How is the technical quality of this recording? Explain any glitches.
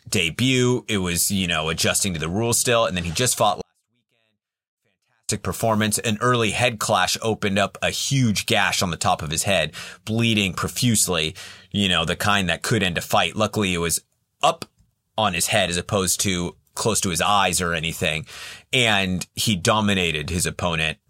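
The recording has one clear glitch. A 24-bit alignment error (too quiet) runs from 3.61 to 5.29 s, just after "then he just fought". Samples held in the low 24 bits of a 32-bit word are being read as full 32-bit integers, so every value lands about 48 dB below where it belongs. The speech stays clean and undistorted, but it abruptly falls to a near-inaudible level for those 1.7 seconds and then snaps back.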